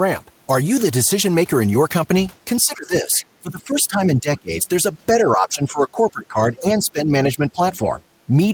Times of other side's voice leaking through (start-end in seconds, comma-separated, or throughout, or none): 3.21-3.26, 7.73-7.77